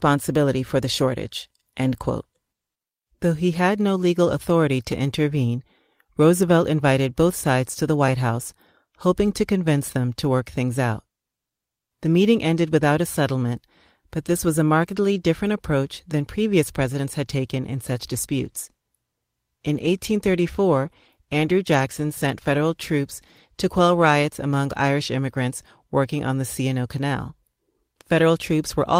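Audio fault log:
17.91–24.97 s, call bitrate drop: after "presidents had taken in", the speech turns rough and watery, holding at its worst for about 5.7 s before clearing by "immigrants working on the". This fits the encoder falling from 32 to 18 kbps as the bandwidth estimate sank, coding each frame more coarsely. The degradation is smooth and continuous, with no gaps, stutters or repeated fragments, so it is not packet loss concealment.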